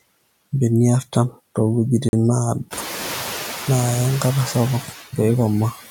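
Noise suppressor artifacts run through the whole clip. The suppressor pulls down the bands it judges to be steady noise by about 12 dB, so the background dips in the gaps and swells back under the speech. Unlike a gate, it never falls to true silence. The effect is clearer once the room noise climbs by about 15 dB near 2.5 s.

From 2.09 to 2.13 s the audio drops to 41 ms of silence and then resumes. This is likely a Bluetooth stall: the headphones' buffer ran empty while delayed packets were resent. Unlike a codec dropout, the gap is plain silence.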